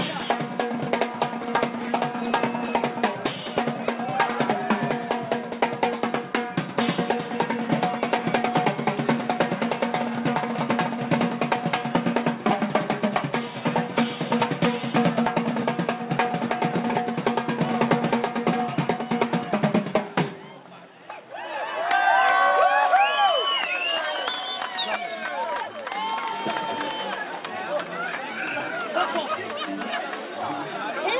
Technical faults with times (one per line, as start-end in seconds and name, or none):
none